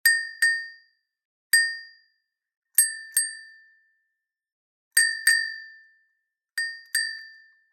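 Nothing here trips the ear: the sound just runs along from beginning to end with no technical faults to point out at any moment.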